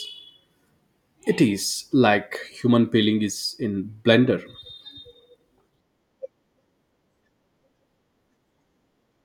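There are no technical faults to describe in this speech recording.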